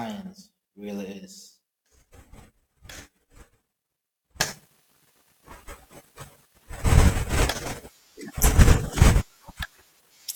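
From the start to 4.40 s the speech drops by about 22 dB and turns faint and distant. That sound points to one channel inverted: with one stereo side in reversed polarity, the centred speech cancels when the two are summed to mono, likely leaving only their small difference. On a waveform this stretch is a narrow band, and a spectrogram shows faint energy.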